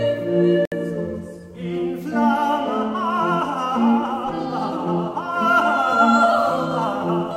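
At 0.65 s the music stops dead and resumes at 0.72 s. This is a gap between stream segments. Two pieces of the stream were timed so that they did not quite meet. The player covered the space between them with silence, adding about 65 ms. Both edges of the hole are abrupt, so it sounds like a brief, clean dropout rather than a fade. None of the music is lost. It is simply pushed later.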